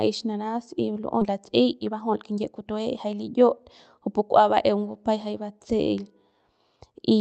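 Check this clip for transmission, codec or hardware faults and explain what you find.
Two faults are audible in this speech clip, which passed through a call path whose Opus coding limits the audio to about 8 kHz.

At 1.21 to 1.23 s there is a skip ahead. Roughly 0.4 s of audio was discarded while later audio was already queued, so playback jumps straight on with no silent gap, unlike a dropout.

From 1.31 to 3.04 s a jitter buffer speed-up trims short pitch-period pieces, about 0.2 s in total, to drain excess delay. Speech runs about 10% fast yet keeps its pitch, unlike a resampling error.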